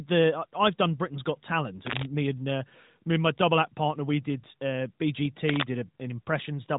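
From 1.85 to 2.09 s, just before "me and uh me", cable scratch noise rasps over the speech at about its level, likely from a worn connector being moved.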